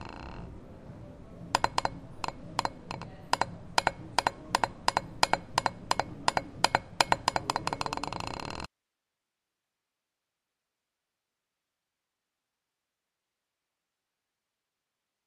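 A recording of sounds cuts off abruptly at 8.66 s and never returns, leaving only hiss around 55 dB below the signal: an audio dropout to a faint residue, likely a lost source while the downstream path stayed live.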